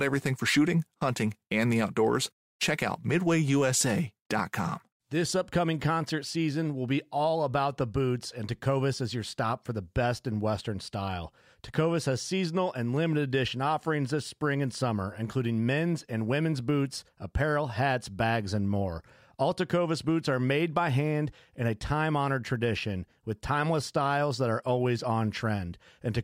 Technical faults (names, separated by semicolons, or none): none